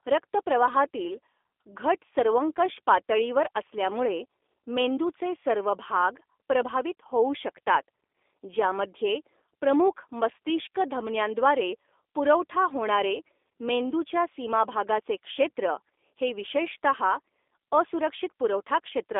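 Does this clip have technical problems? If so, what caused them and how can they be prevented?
Yes: the whole clip has G.729 codec damage, a rough, synthetic speech sound with nothing above 3.7 kHz, fitting an 8 kbit/s line. To prevent it, use a wideband codec like Opus instead.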